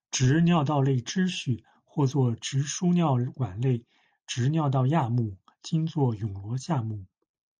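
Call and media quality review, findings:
Watery, swirly texture across the whole speech clip, s sounds chirpy and metallic, treble dull, consonant onsets smeared. Likely MP3 compression starved of bits, fitting a low rate near 48 kbps: top band cut, weak frequency lines dropping in and out between frames.

Brief dropout at 2.12 s, just before "直输尿管". Underrun with held sample: output buffer emptied, converter froze on its last value for about half a millisecond. Live audio lost meanwhile, so resumption jumps.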